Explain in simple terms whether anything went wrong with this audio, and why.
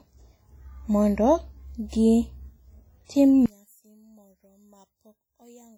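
Throughout the clip the speech sounds washy and ringing, with a hiss that rises and falls with the voice, and the damage is heavy. This is WMA compression, likely at a low quality setting, which smears noise around each sound and throws away quieter detail.

From 3.46 s to the end, the speech suddenly drops to a much quieter copy of itself. The likely cause is one channel inverted: one side of a stereo recording was flipped in polarity, so when both sides were combined into one, they mostly cancelled out.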